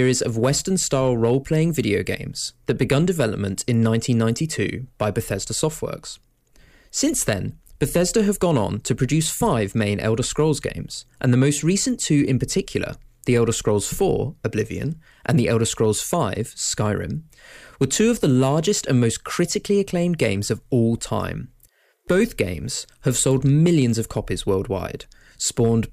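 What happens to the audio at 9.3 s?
At 9.3 s the speech carries a brittle crackle on its loudest moments, the same roughness that runs through the whole recording rather than an event at that instant. This is hard clipping: the signal is driven about 5 dB past what the chain can pass, so the tallest peaks are sliced off flat. Only a small fraction of samples, well under one percent, hit that ceiling, which is why the distortion is a crackle on peaks and not a constant fuzz.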